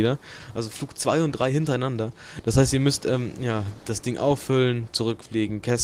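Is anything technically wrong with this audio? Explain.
No, nothing technically wrong can be heard here, as the signal stays steady and intact throughout with no audible technical faults.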